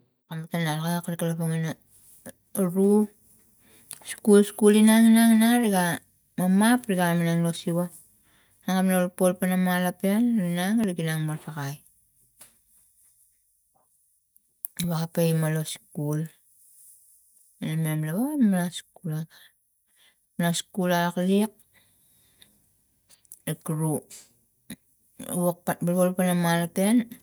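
From 10.84 s to 16.83 s the speech carries a regular tick, about once every second, roughly seven in all. Each is a tiny discontinuity where about a millisecond of audio has simply been skipped, not replaced with silence, so the waveform jumps and clicks. These are periodic USB or driver dropouts: something blocks the USB bus or audio driver on a fixed one-second schedule, and the stream loses a sliver of samples each time.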